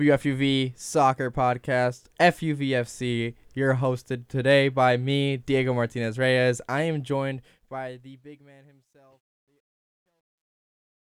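The fade-out that starts around 7 s turns gritty from 7.11 s, worst from 8.68 s to 11.03 s. This is truncation distortion on a fade: an undithered gain stage, consistent with 12 bits, squares the waveform off into coarse steps.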